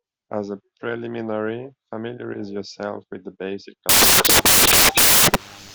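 At 3.89 s the speech gives way to loud, harsh broadband noise that lasts to the end. These are samples built from the wrong bytes. Each value's bytes are assembled misaligned or swapped, so the rapidly changing low bits dominate.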